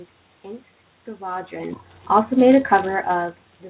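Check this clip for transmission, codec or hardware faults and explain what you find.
No transmission, codec or hardware faults turn up in this clip.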